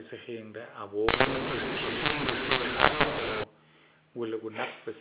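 From 1.09 to 3.44 s the speech turns harsh and gritty, and the gaps between sounds fill with hiss. This is mu-law and A-law mixed up: audio written as A-law is read back as mu-law, so sample levels are remapped wrongly and near-silent samples are lifted well above silence.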